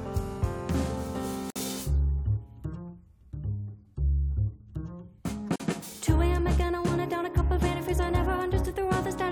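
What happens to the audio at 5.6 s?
A gap at a join of encoded pieces opens from 5.56 to 5.60 s, a gap of about 40 ms. Separately encoded pieces were butted together untrimmed, so encoder delay and end padding remain. The sound drops out, its edges smeared, then resumes where it stopped.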